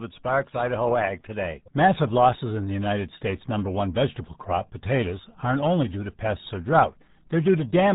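From start to finish, the speech has passed through the RealAudio 14.4 codec, an old dial-up speech coder whose heavy damage points to a rate of about 8 kbit/s. At that rate the coder can only keep a coarse model of the signal. Everything above 3.8 kHz is gone, so the speech sounds muffled and boxed-in. What remains is smeared into a gargly, watery texture as the coder rebuilds each frame from too little information.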